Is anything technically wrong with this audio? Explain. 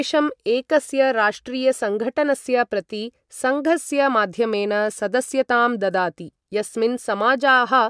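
No technical faults are present.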